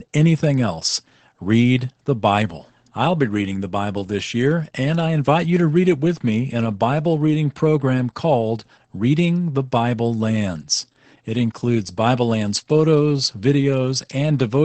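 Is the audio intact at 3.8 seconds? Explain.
No, at 3.8 seconds the speech is running through Opus voice compression, as it does for the whole clip. The low-rate SILK coding, which fits roughly 12 kbps, cuts everything above about 8.4 kHz and leaves the speech noticeably muffled, hoarse and a touch robotic.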